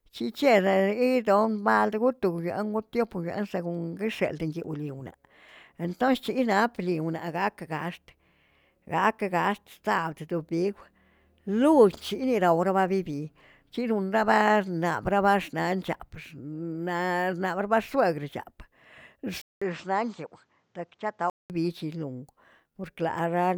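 At 19.42 s a 200 ms gap opens. The speech then returns duller and a few decibels quieter over a faint new hiss until 21.50 s. A spectrogram shows everything above 8.2 kHz cut away, and the waveform drops slightly. The likely cause is the input switched to a poorer device.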